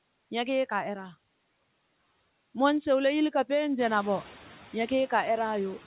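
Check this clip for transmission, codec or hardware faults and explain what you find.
One fault runs through the whole speech clip: noise suppressor artifacts. The room noise that grows by about 15 dB from around 4 s stays in the recording, and the call path's cutoff at 4 kHz points to a narrowband G.711-style telephone codec.

Noise suppressor artifacts, throughout: the suppressor estimates the steady background in each band and pulls it down by about 15 dB frame by frame. The residue swells under syllables and drops in pauses. On a spectrogram, the noise floor appears as patchy, blinking specks between words.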